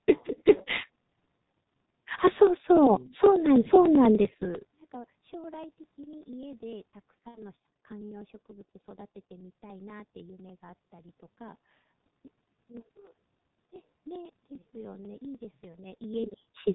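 From start to finish the speech carries the G.723.1 codec sound: heavily damaged, muffled and hoarse, with nothing above 4 kHz and consonants smeared because the voice model is refreshed only every 30 ms. The coarseness fits a rate of about 6 kbit/s. Unlike a plain low-pass or band-limited channel, the roughness comes from the codec's slow, crude modelling of the voice, not just from missing treble.

From 0.09 s to 16.63 s, periodic USB or driver dropouts tick through the audio every 0.099 s, about 150 times in all. Each time roughly a millisecond of signal is skipped outright rather than filled with silence, so the waveform jumps and leaves a small click. The metronome-steady spacing and the fact that the ticks sound only while there is signal separate them from random network glitches or from crackle in the room noise.

Between 7.29 s and 7.42 s, after VoIP packet loss concealed by the speech codec, 60 ms of audio is missing, which fits two 30 ms frames. 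The decoder extends the last pitch and spectral shape, so the voice turns into a fading buzzy tone or coloured noise instead of a hard gap. Because each frame depends on the one before, the distortion and weakness carry on past the loss itself, unlike the instant, self-contained driver ticks.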